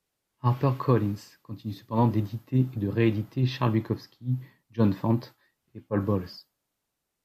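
No technical faults can be heard anywhere in this recording.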